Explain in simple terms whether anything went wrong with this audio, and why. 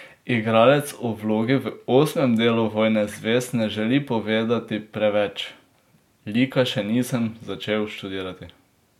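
Nothing went wrong here.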